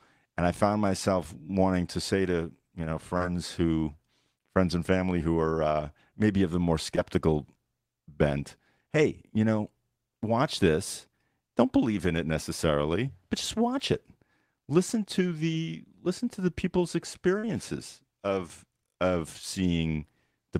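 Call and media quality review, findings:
Short concealed packet loss: audio missing at the jitter buffer, decoder extrapolated roughly 12–43 ms. Brief smears at 3.17–3.22 s after "say to you know", 6.96–6.99 s, and 17.39–17.45 s.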